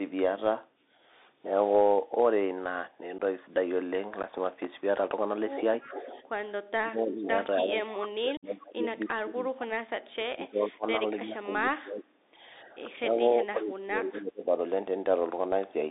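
Speech carried over a Bluetooth CVSD headset codec runs the whole clip. The band is confined to roughly 300 Hz to 3.7 kHz, consistent with the 64 kbit/s one-bit delta modulation this link uses. Because the adaptive step cannot keep pace with fast, loud high content, sibilants come out scratchy and a grainy hiss sits beneath the voice. On a spectrogram, energy stops abruptly near 3.7 kHz with a speckled noise floor throughout. Unconcealed Bluetooth headset packet loss punches abrupt holes into the signal at 3.18 s, from 4.23 to 4.25 s, and from 8.37 to 8.45 s. The first two gaps last about 11 ms each, and the third lasts about 56 ms, which fits a burst of many consecutive short packets. Nothing fills these gaps, so each one has abrupt edges, and the audio returns quieter for a moment. A waveform shows flat-lined notches with sharp vertical edges, and a spectrogram shows thin vertical blank strips. 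Between 5.82 and 6.22 s an echo leak is audible: a delayed copy of the voice trails about 292 ms behind and sits about 15 dB down. The likely cause is a far-end loudspeaker whose echo canceller let part of the signal through. On a spectrogram it appears as a faint duplicate of the harmonic pattern, shifted right. Speech suppressed in double talk then causes the level to dip or vanish in chunks. The drops are shallow, about 10 dB, at 6.22 to 6.28 s and 12.64 to 12.89 s. They are deep, up to about 30 dB, at 6.67 to 7.31 s and across most of 7.62 to 12.11 s, and about 25 dB at 13.41 to 14.5 s. This is likely an echo canceller ducking the talker while the other side spoke, and the waveform envelope collapses in those stretches.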